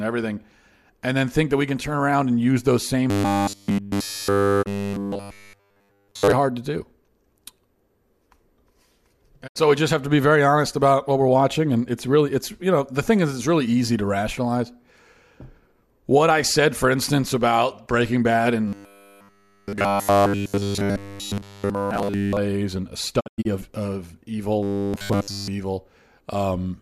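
From 3.10 to 6.32 s, after "and use those same" and up to "hard to do", the speech becomes robotic sound from repeated short buffers. New audio likely arrived too seldom, so the last 10 ms was replayed over and over while the real signal was skipped. The result is a rigid, metallic 100 Hz buzz. On a spectrogram this shows as evenly spaced horizontal harmonics at multiples of 100 Hz, and the waveform repeats the same 10 ms cycle. Inside that span, at 4.61 s, a digital broadcast dropout removes 24 ms, which fits a single lost frame. The sound fades out over 20 ms into silence and then returns, leaving a narrow blank vertical gap on the spectrogram and a flat stretch in the waveform. A second dropout at 9.46 s loses 72 ms. The buzz returns from 18.68 to 22.37 s, ending just before "and a". From 23.19 to 23.47 s, dropouts punch several separate holes across 240 ms, losing 168 ms in total, with the longest run 96 ms. 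The buzz comes back once more from 24.63 to 25.48 s, after "of of evil".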